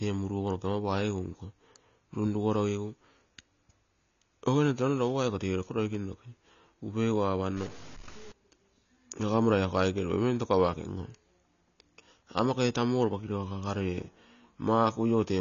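AAC compression runs through the whole of this speech clip. Nothing is present above 7 kHz, and sibilants and sustained vowels have a dull, smeared, warbling texture, most likely from AAC-LC coding at a low bitrate, which fits roughly 24 kbps, where the encoder discards high bands and coarsely quantises the rest. A stuck bit appears from 7.57 to 8.32 s. The likely cause is one data bit held at a fixed value, so about half the samples are pushed off by that bit's weight in a pattern that follows the waveform.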